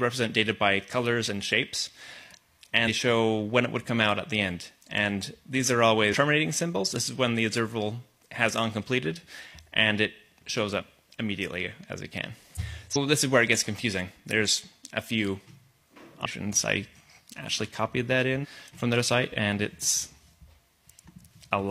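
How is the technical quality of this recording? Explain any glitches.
The recording has six audible jumps where the sound skips ahead. They fall at 2.84–2.89, 6.09–6.15, 12.54–12.60, 12.91–12.97, 16.21–16.27 and 18.39–18.46 s. At each one the audio resumes further on. Most jumps lose around a third of a second. The one at 6.09 s loses closer to a fifth, and the jump at 12.54 s drops roughly a full second.

These are compressed frames skipped. Whole blocks of the encoded audio were never played, either missing from the file or rejected as damaged by the decoder, so playback lurches forward in frame-sized steps that fit frames of about 46 ms.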